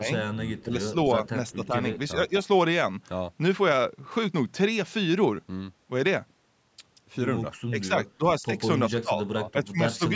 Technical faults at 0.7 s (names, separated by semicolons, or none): speech suppressed in double talk